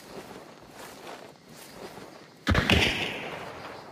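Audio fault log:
Nothing stood out on listening to this audio.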